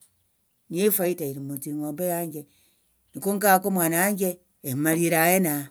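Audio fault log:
No technical faults can be heard anywhere in the speech recording; the signal holds steady and continuous throughout.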